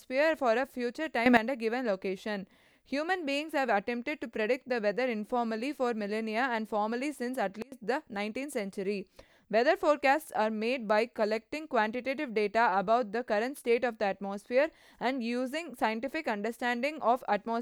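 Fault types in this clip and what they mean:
Sudden gain jump: the digital gain was likely switched from one sample to the next with no ramp to ease the change, so the speech and its background noise shift in level together. At 1.26 s the level leaps up by about 12 dB for roughly 0.11 s. At 7.62 s it falls by about 24 dB for about 0.1 s. Each step starts and stops abruptly rather than fading.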